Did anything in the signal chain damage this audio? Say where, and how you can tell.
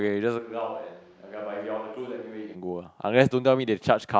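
Yes. From 0.4 to 2.54 s the speech suddenly turns hollow, roomy and bass-light, about 10 dB quieter and noisier. This is likely a switch to a distant microphone at capture.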